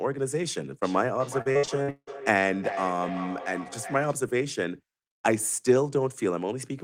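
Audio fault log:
0.82–4.25 s: feedback echo between two devices. Each phrase returns after roughly 0.4 s, thinner and more ringing, up to about 9 dB below the speech, as a second device's playback re-enters the microphone uncancelled. A spectrogram shows high-tilted copies of each syllable trailing at regular spacing.
1.41–2.24 s: repeated packet loss (robotic sound). A rapid string of holes, the longest 170 ms, leaves about half this stretch patched by extending the previous sound, giving a choppy sound with pieces missing. The waveform shows repeated identical cycles; the spectrogram shows flat, smeared harmonic bands.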